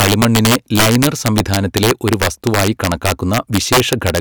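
Throughout the speech, the loudest moments break into violent, snapping cracks, far harsher than ordinary clipping, while quieter passages pass through untouched. This is integer overflow: the signal was pushed roughly 11 dB too hot, and instead of being limited at full scale, each peak that exceeded the largest integer wrapped around to the opposite sign. Only a small share of samples, around one or two percent, cross that line, but every one jumps across the full range, producing the sharp cracks.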